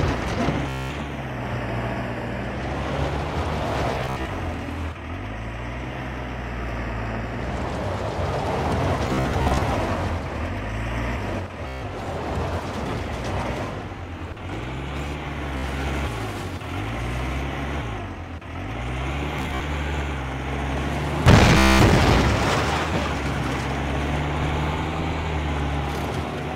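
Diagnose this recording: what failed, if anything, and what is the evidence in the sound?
The Bluetooth link dropped out seven times, at 0.69–0.92, 3.92–4.30, 9.07–9.62, 11.68–11.82, 15.58–15.65, 19.39–19.61 and 21.58–21.81 s. Each time you get a buzzy machine-gun stutter as the receiver replays its last short buffer, then the sound picks up further along, as if it kept playing underneath.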